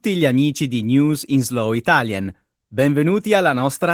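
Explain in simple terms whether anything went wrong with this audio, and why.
Yes, something went wrong: the speech was squeezed hard by Opus voice compression for the whole clip. To save data, the coder rebuilt the voice from a rough model, throwing away fine detail, so the speech sounds plainly muffled, hoarse and slightly robotic from start to finish.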